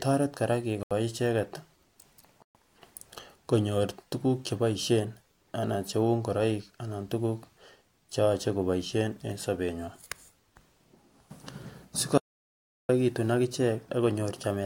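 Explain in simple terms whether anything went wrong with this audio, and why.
A few things went wrong in this speech. The first two are short Bluetooth stalls, at 0.83 to 0.93 s and again at 2.42 to 2.56 s. The sound drops to silence for about 77 ms and then 126 ms, then carries on. That pattern points to a likely wireless hiccup: packets got held up, the headphones ran out of buffered audio and simply paused until the data caught up.

The bigger one is an audio dropout to silence from 12.18 to 12.89 s. For about 0.7 s the sound vanishes completely, with no background hiss at all, and whatever was said in that stretch is gone for good. That's the signature of the input likely being lost for a moment, through a loose connection or a brief mute, while the recording kept rolling and filled the gap with dead silence.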